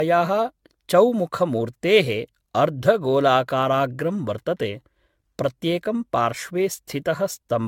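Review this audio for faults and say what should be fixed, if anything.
Generation loss runs through the whole speech clip: the sound is swirly, hollow and smeared, consonant attacks are blurred, and nothing reaches above 17 kHz. The likely cause is around ten rounds of decoding and re-encoding with AAC-LC at a rate pointing to 96 kbit/s, each pass requantising on a shifted frame grid so noise and spectral holes pile up. A single encode at that rate would sound far cleaner, which separates this from plain low-bitrate coding. To prevent it, keep a lossless master and encode to a lossy format only once, at the final step.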